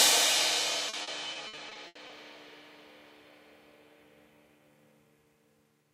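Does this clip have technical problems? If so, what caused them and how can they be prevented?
Yes. Between 0.89 and 2.11 s there is repeated packet loss (robotic sound): nine gaps, up to 80 ms each, filled by stretching the preceding sound, about a quarter of that span concealed, producing choppy stuttering with pieces missing. A more stable network with a larger jitter buffer prevents this.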